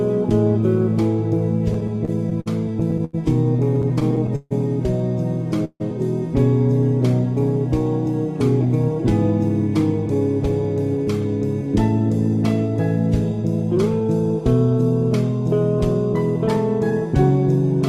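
From 1.73 to 3.15 s there's a run of repeated stalls, a stutter: the jitter buffer keeps running dry because packets arrive late, so the receiver stretches the last sound to cover it. That happens 11 times, about 240 ms in all, with the longest hold at 86 ms. A second burst follows from 3.75 to 4.53 s with 8 stalls adding up to 213 ms, the longest 150 ms, so over a quarter of that stretch is filler. Nothing is actually lost. It just drags and hiccups.

At 5.65 to 5.82 s there's a short call audio freeze. The sound hangs and decays, ending in about 40 ms of silence, before picking up where it left off. That 152 ms inserted gap is likely packets held up in transit, emptying the buffer, with the delay growing by the same 152 ms.

Then the receiver cuts back excess buffered delay with a jitter buffer speed-up. From 10.46 to 11.68 s it plays at 102% speed, and from 13.42 to 14.09 s at 105%. 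Each time it snips out tiny pitch-period slices, roughly 40 ms in total per stretch, so the pitch stays put, and the second, faster stretch sounds hurried.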